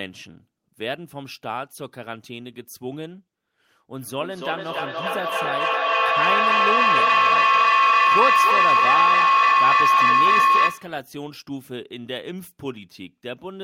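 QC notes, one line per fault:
4.01–11.04 s, feedback howl: two devices on the call share a room, so each loudspeaker-to-microphone pass adds level instead of losing it. The repeats narrow to a tone around 1 kHz, pulsing roughly every 300 ms and peaking about 11 dB above the speech.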